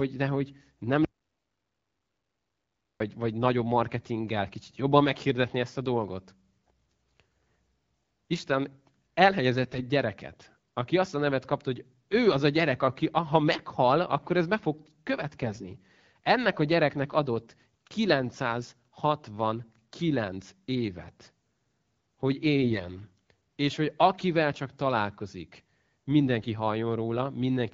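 From 1.05 to 3.00 s, just after "de hogy nem", the speech cuts to an audio dropout to silence lasting nearly 2 s, ending at "vagy nagyobb marketinggel kicsit". The gap is silent with no room tone, so the input was likely lost while recording continued.

AMR bit errors then appear at 1.37 s (buried within that silence), 9.64 s just before "gyereket aki azt a", 15.42 s, 22.61 s and 26.38 s, each lasting roughly 60 to 250 ms. Flipped bits in the lightly protected part of the frames misplace excitation pulses and skew pitch, gain and spectral detail, at error rates of a few percent. Unlike the dropout, level and pitch carry on, but the speech turns briefly hoarse, scratchy and gargly.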